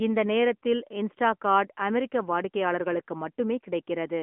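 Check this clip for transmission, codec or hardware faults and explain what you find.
One fault runs through the whole clip: the AMR narrowband mobile codec. The speech passed through an AMR-NB encoder in its 10.2 kbps mode. It was confined to a 200 Hz to 3.4 kHz telephone band, so nothing survives above 3.5 kHz. Each 20 ms frame is rebuilt from a vocal-tract model and sparse pulses, leaving the speech muffled and plainly buzzy and synthetic.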